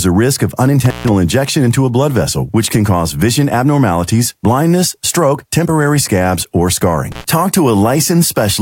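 At 0.85 to 1.10 s, then again at 7.12 to 7.24 s, there's an intermittent contact: a loose plug or cable briefly opening. The speech drops out for about 145 ms, then about 57 ms, with crackle at each edge and faint hiss in the gap.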